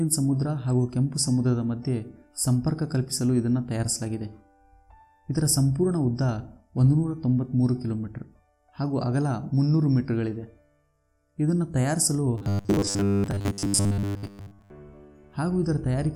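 From 12.38 to 14.71 s the sound turns into robotic sound from repeated short buffers, a rigid metallic buzz at 100 Hz. This is likely from late-arriving audio being padded by looping a 10 ms slice, with most of the real signal skipped. Unlike plain dropouts, there is no silence, but a fixed-pitch buzz that follows the original only roughly.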